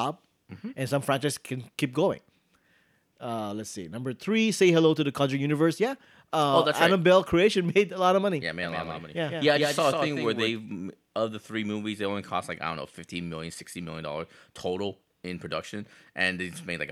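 Speech, with a doubled audio track from 8.63 s to 10.49 s: a second full-band copy of the same sound runs about 150 ms behind and roughly 5 dB quieter, most likely a second capture through a slower path or two copies misaligned in an edit. Unlike an echo or room reverberation, the copy is a single flat repeat with no decay tail or room colour, and it switches on and off abruptly at those boundaries.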